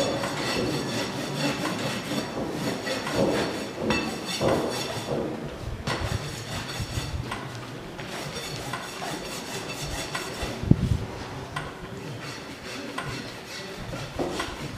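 Nothing stood out on listening; no audible fault turned up anywhere in the recording.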